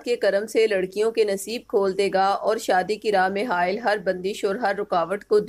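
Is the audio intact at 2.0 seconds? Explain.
Yes, at 2.0 seconds the audio plays through cleanly, with no dropout, click, distortion or other break in the signal.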